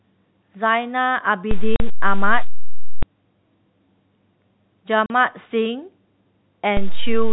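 At 1.51 s there is a DC step. The waveform's zero line suddenly shifts, as if an offset had been switched into the signal path. You hear it as a low thump. The speech carries on unchanged over it. The offset lasts until 3.03 s.

Inside that stretch, at 1.76 s, comes packet loss filled with silence. About 40 ms of speech is missing, which fits two lost 20 ms packets. The receiver played pure silence in their place. The gap has hard edges. The same fault returns at 5.06 s with another 40 ms hole and the same hard-edged cut. Above that, the audio has the closed-in, 4 kHz-limited sound of G.711 telephone coding.

At 6.77 s a second DC step arrives. Again there is a low thump as the zero line jumps. This time the offset holds through to the end of the clip.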